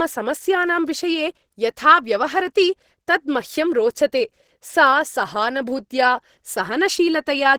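Throughout, the speech sounds muffled and hoarse with plainly audible damage, likely Opus compression in its hybrid speech mode, consistent with a rate near 16 kbps.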